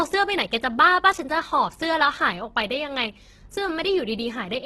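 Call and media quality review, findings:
Grainy, rough speech across the whole clip, nothing above about 12.1 kHz. Likely Opus compression in its music mode. Bits are spread thin, so upper bands get filled with folded or noise-like content. That's where the noisy, gritty texture comes from, rather than MP3-style swirl. Heavy damage, in line with a very low bitrate, around 12 kbps.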